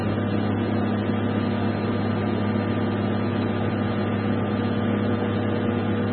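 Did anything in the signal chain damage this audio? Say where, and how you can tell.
Yes. The damage most likely came at the codec stage, from MP3 compression at a very low bitrate. Throughout the clip nothing sits above 4.2 kHz, a hard ceiling that fits an encoder starved to around 16 kbps cutting its treble at a fixed point. With so few bits, weak frequency lines are dropped and flicker between frames, leaving heavy codec damage: a watery, swirling texture and blurred transients across the sound.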